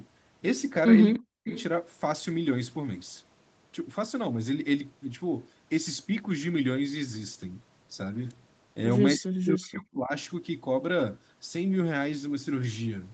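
At 1.14 to 1.19 s and again at 1.48 to 1.63 s, an echo leak is heard. A faint copy of the speech returns about 0.3 s late, well below the main level. The likely cause is a far-end echo canceller letting loudspeaker pickup through.

Between those scraps, from 1.19 to 1.48 s, and later from 9.17 to 10.12 s, the speech drops almost to silence. This is likely speech suppressed in double talk: the canceller ducked the talker while both sides spoke at once.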